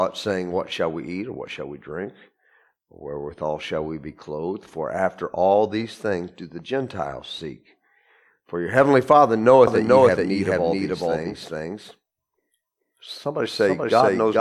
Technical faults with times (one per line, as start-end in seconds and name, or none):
9.67-14.40 doubled audio track